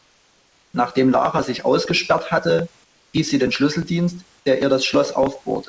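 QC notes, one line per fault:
0.00–0.74 s and 2.84–3.14 s, comfort noise in place of the background: in both pauses the real room background gives way to a flat, featureless hiss about 4 dB quieter. That's likely discontinuous transmission, with the receiver filling the gaps with synthetic noise while the sender goes silent.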